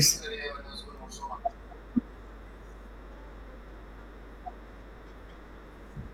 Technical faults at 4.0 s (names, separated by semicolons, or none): mains hum